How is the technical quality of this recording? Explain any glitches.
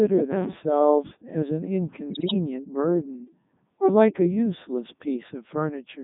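The recording is poor throughout, with one short burst of heavier damage. From start to finish the speech sounds robotic and buzzy, squeezed into a band of roughly 150 Hz to 3.7 kHz. This is the Codec 2 vocoder, and the damage is heavy. The decoder never keeps the original waveform. It rebuilds the voice from sine waves, steered only by pitch, voicing, energy and a coarse spectral shape, and the sound fits its 3.2 kbit/s mode.

From 2.10 to 2.34 s the voice breaks up into warbles and jumps in pitch, level and tone colour. These are bit errors on digital voice radio. A few percent of the bits arrive flipped at such a low data rate, so each wrong bit throws off the pitch, loudness or spectrum of an entire frame. The resulting quarter-second glitch points to around ten damaged frames.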